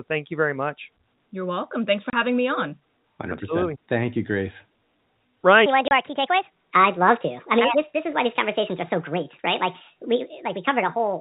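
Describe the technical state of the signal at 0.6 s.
At 0.6 s the speech is intact, with only the expected sound of G.711 telephone coding: nothing above 4 kHz and at most a faint noise that follows the level.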